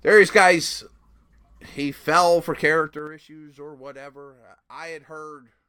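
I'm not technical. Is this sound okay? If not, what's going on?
No. Zipper noise from 2.82 to 3.16 s, just after "he fell for" and before "or whatever". The speech drops sharply in volume in abrupt jumps, about ten per second, instead of sliding smoothly. Each jump makes a tiny click, so you hear a brief ticking, zipping sound.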